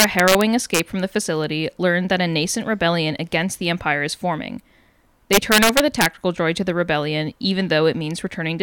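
From 0.00 to 0.79 s the speech shows integer overflow, with the signal driven about 3 dB past full scale. Peaks that should have been limited instead wrap to the opposite sign and swing across the whole range, producing harsh, violent cracks far sharper than ordinary clipping. The same fault returns from 5.33 to 6.06 s, driven harder at about 5 dB over, so more peaks wrap and the cracking is denser and more severe.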